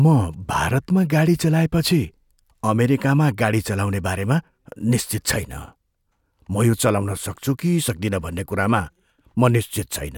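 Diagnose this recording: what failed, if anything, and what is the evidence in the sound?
Nothing failed, and the sound of the recording gives no evidence of a fault at any stage.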